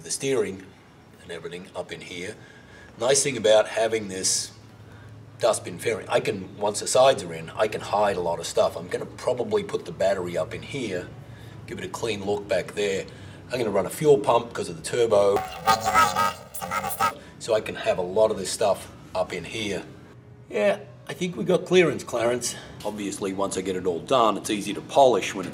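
From 15.36 to 17.11 s the sound turns into a robotic buzz. This is planar audio read as interleaved. The stereo data arrives as blocks holding all left samples and then all right samples, but it is read as alternating left-right pairs. Each block replays twice at double speed, left then right. Here the blocks are very short, about 2.9 ms, which fits a 128-sample block. So the buzz sits at the block rate of 345 Hz, with no clear octave shift.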